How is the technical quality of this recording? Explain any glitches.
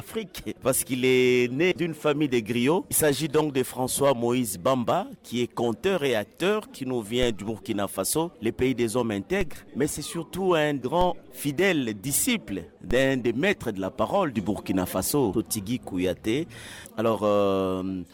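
The recording has two kinds of fault: brief dropouts where compressed audio goes missing, and several low thumps from shifts in the signal's zero line.

Compressed frames skipped at 1.71, 2.91, 10.81 and 15.33 s: whole codec frames were lost or rejected, so playback jumps ahead by roughly a tenth of a second at the first, about 70 ms at the second and about a fifth at the last two. These amounts fit 20 ms frames. On a waveform the sound jumps forward abruptly, and on a spectrogram the content changes suddenly.

DC step at 7.23, 9.41, 11.01 and 12.91 s: the waveform's zero line jumps suddenly, then drifts back over a fraction of a second, the way a 2 Hz high-pass would pull it back. Each step is a low thump under the unchanged sound. On a waveform the trace lifts off centre and curves back. On a spectrogram each step is a thin broadband line with energy at the very bottom.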